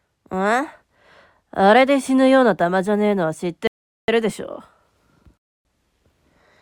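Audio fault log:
3.67–4.08 s, rebuffering stall. The audio cuts abruptly to silence for about 0.41 s and then carries on from the exact point where it stopped. No material is skipped or repeated. The player had used up the audio it had already downloaded and paused to wait for more data to arrive. The gap adds time to the playback without losing any content, so the sound after the break continues seamlessly from what came before it.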